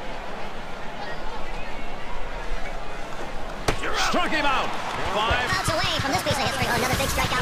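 A section at the wrong speed runs from 5.47 s to the end: played 1.6 times too fast, pitch rising about seven semitones, likely from a wrong playback clock.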